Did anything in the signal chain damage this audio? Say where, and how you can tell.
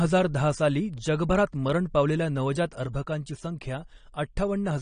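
Yes. At the codec stage, AAC compression is likely responsible for plainly audible damage across the whole speech clip. Nothing is left above 9.7 kHz, so the speech sounds dull and smeared, with a fizzy edge on sibilants, which fits AAC-LC at about 32 kbps.

A sudden gain jump occurs at 2.86 s, just after "जगभरात मरण पावलेल्या नवजात". The speech and background noise drop together by about 4 dB and stay lower until the end. This points to a digital gain change applied instantly, without a ramp.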